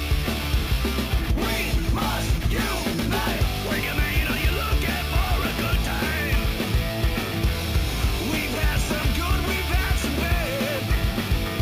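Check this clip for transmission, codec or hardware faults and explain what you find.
A bright, metallic fizz rides on top of the sound for the whole clip, rising and falling with its level. It is imaging from sample-and-hold upsampling: audio at 16 kHz was raised to 44.1 kHz by repeating samples without a smoothing filter, mirroring the spectrum into the 8 to 16 kHz band at about 18 dB below the signal, with that lowest copy moving opposite to the pitch.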